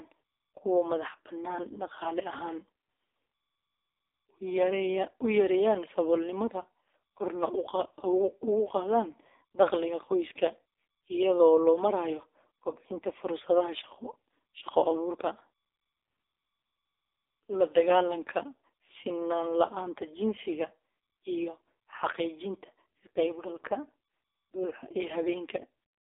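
From start to finish the speech carries the sound of the AMR narrowband mobile codec. The band runs from about 150 Hz to 3.7 kHz, and nothing above 3.7 kHz survives. The codec rebuilds the voice from a vocal tract model fed by a few pulses per short frame. Here it has very few bits to work with, which fits one of its lowest modes, near 5 kbps. The damage is heavy. The voice sounds buzzy, thin and synthetic throughout.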